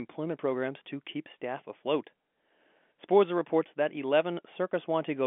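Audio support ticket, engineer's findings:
Listened through the full recording; nothing stood out as a fault, and the sound is consistent with ordinary telephone-band coding of speech.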